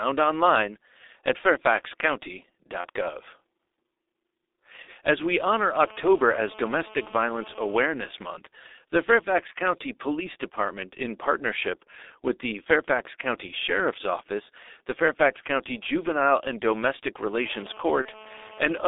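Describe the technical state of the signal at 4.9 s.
Right at 4.9 s you're at the tail end of a VoIP packet loss concealed by the speech codec, running from about 4.82 to 4.90 s. The decoder filled a gap, which fits two missing 30 ms frames, by stretching its last pitch and filter and fading them, so the sound smears into a buzzy tone or coloured noise that trails off, and the voice stays weak or distorted for tens of milliseconds after decoding resumes.

Underneath that, the whole clip carries heavy G.723.1 codec damage. The sound points to a low-rate stream around 6.3 kbit/s, and the line band is squeezed to roughly 300 Hz to 3.7 kHz. That leaves the speech muffled and hoarse, with smeared consonants from the coarse, slowly updating voice model.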